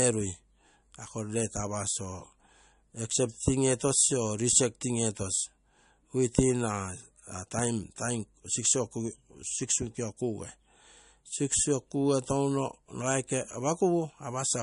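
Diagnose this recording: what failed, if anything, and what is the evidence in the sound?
The codec stage is where it goes wrong, with damage plainly audible across the whole speech clip. There's nothing above 10.6 kHz, so the top end is sheared off flat, and the sibilants come out watery and a bit chirpy where weak frequency lines flicker in and out between frames. That's likely MP3 compression starved of bits, which fits a low bitrate of around 44 kbps: the encoder drops the treble and discards quiet detail to stay within budget.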